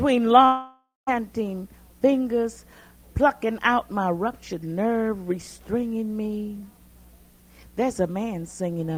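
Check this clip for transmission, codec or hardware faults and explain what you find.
One fault stands out, a long network dropout from 0.45 to 1.09 s. A stretch of about 620 ms is lost, most likely because packets stopped arriving. The receiver stretches the last sound into a fading buzz, leaving roughly 190 ms of silence before the audio resumes further on. Unlike a brief packet loss, where concealment covers a short gap smoothly, this fill decays to nothing and the missing portion never returns.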